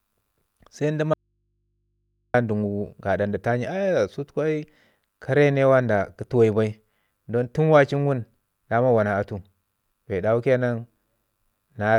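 A speech recording with an audio dropout to a faint residue from 1.14 s to 2.34 s, just after "se nda": the speech cuts off abruptly and for about 1.2 s only a low mains hum remains, roughly 50 dB below the speech level, before the signal snaps back. The cause is likely a signal interruption upstream while the path after the break stayed live. On a waveform the gap is a near-flat band between sharp edges; a spectrogram shows a thin horizontal hum line across it.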